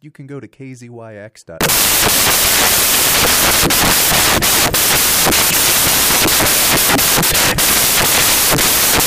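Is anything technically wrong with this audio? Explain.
Yes. From 1.61 s to the end, the speech turns into samples built from the wrong bytes. The decoder is assembling each sample from a misaligned or reversed byte pair, so the rapidly fluctuating low-order bits land in the most significant positions and dominate every value. The result is loud, harsh broadband noise, close to white on the louder passages.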